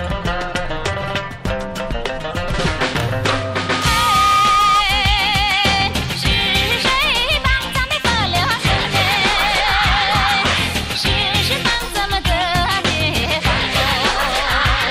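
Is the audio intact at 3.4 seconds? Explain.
No, 3.4 seconds is right where a loudspeaker feedback squeal kicks in. It runs from 3.40 to 4.84 s. The mic is picking up its own speaker, and the loop gain tops one at 1.2 kHz. That tone swells over about three quarters of a second and ends up sitting roughly 5 dB above the sound.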